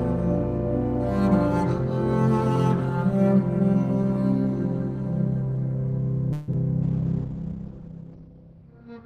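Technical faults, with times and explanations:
6.32 to 6.49 s, call audio freeze: Packets were likely delayed in transit, draining the jitter buffer. For about 154 ms the last sound is stretched into a fading buzz or hiss rather than silence, and the audio then resumes where it stopped, 154 ms later, with nothing lost.
6.53 s, short concealed packet loss: About 10 ms of audio never reached the decoder in time, and the receiver patched the hole by extending the preceding sound for about 6 ms before blending back. The result is a momentary smear or wobble.
6.83 s to the end, call bitrate drop: A falling bandwidth estimate forced the encoder down from 32 to 11 kbps, staying at the lowest rate for about 1.4 s. Bandwidth narrows from 20 kHz to 6 kHz, so the sound turns muffled, coarse and watery.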